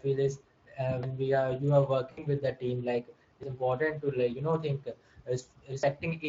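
Throughout, the speech passes through the Speex codec with too few bits for its excitation, which fits a bitrate near 20 kbps. The damage is plainly audible: the voice sounds noisy and hoarse.

From 2.11 to 2.24 s, VoIP packet loss concealed by the speech codec occurs. About 60 ms of packets never arrived, which fits three lost frames. The decoder stretched its last pitch and filter with falling gain, so the speech smears into a fading sound and stays weak briefly afterwards.

At 3.43 s the sound skips abruptly, with roughly a tenth of a second missing and the two sides butted together without silence. The likely cause is audio missing between chunks: a piece dropped while the recorder switched between 2.5-second chunks.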